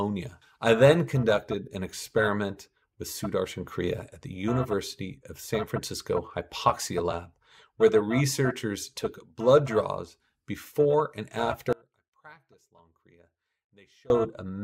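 At 11.73 s the audio drops out abruptly, leaving only a faint residue roughly 30 dB below normal for 2.37 s until 14.10 s. The likely cause is a break in the wanted signal while the downstream path stayed live; unlike a fade or pause, the cut is instant.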